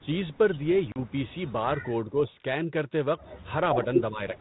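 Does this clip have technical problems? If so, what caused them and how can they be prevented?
Yes. At 0.92 s the speech drops into a hard-edged silent hole lasting about 40 ms, to 0.99 s, roughly two packets' worth. This is packet loss on an ADPCM call. The light, steady coding of the 32 kbit/s G.726 link runs on either side of it. Unlike a codec gap that is smoothly concealed, ADPCM carries state from sample to sample. After the gap the receiver's predictor and step size no longer match the sender's, so the speech comes back slightly distorted briefly before settling. Prevention: use a jitter buffer with packet-loss concealment that also resynchronises the decoder state.

From 4.11 s to the end at 4.40 s the speech dips in pieces, falling by around 15 dB at the deepest, for about 150 ms in total. This is most likely speech suppressed in double talk, where the far side spoke at the same time and the echo canceller, unable to separate the talker from the loudspeaker echo, turned both down. 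Packet loss leaves a sudden silent hole followed by a recovery artefact. This is a ducking of the voice instead. Prevention: use an echo canceller with reliable double-talk detection, or headsets to cut the echo path.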